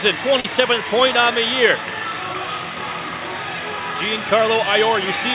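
At 0.40 to 0.45 s, a short concealed packet loss leaves about 40 ms missing. The decoder extends the preceding sound to bridge the gap, giving a brief smear. At 2.33 s, a shorter one of about 10 ms gives a brief wobble. The narrow band, with nothing above 4 kHz, fits a G.711 call path.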